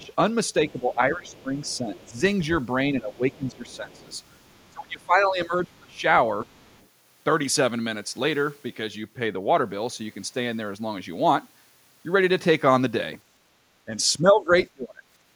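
From 0.00 to 6.47 s the talker's speech is suppressed in double talk. It dips by around 20 dB at its deepest, for roughly 3 s in total, likely because the echo canceller could not separate near-end speech from loudspeaker echo and attenuated both.

Overlapping this, the other side's voice leaks through from 0.02 to 4.73 s at about 30 dB below the speech, and again from 5.96 to 6.87 s at about 35 dB below. This is likely residual loudspeaker echo that the canceller failed to remove from the microphone signal, heard as a faint second voice underneath.

Double-talk suppression returns from 13.86 to 15.02 s, again around 20 dB deep and affecting roughly 0.7 s of speech.

From 15.30 to 15.35 s the background is gated by the echo canceller. The room sound drops by about 10 dB for a brief moment as the microphone path is pulled down hard while the loudspeaker plays.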